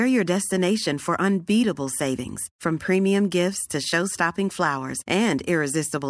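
Aliasing runs through the whole clip. The audio was brought down to a lower sample rate without first removing content above the new limit, which fits a drop from 44.1 kHz to about 22 kHz. Energy above 11 kHz therefore folds back below that point as false, unrelated frequencies, roughly 20 dB under the speech. Sibilants sound gritty and metallic, and the spectrum stays dense right up to the 11 kHz edge instead of rolling off.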